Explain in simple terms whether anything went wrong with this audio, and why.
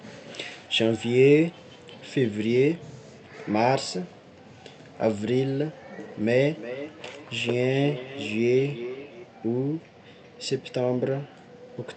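From about 5.98 to 9.35 s the speech comes back as distinct repeats, roughly every 0.4 seconds, quieter than the talking. This is feedback echo between two devices: another device on the call replays the sound, and the microphone picks it up again. Unlike room reverb, it forms separate, evenly spaced copies rather than a smooth tail.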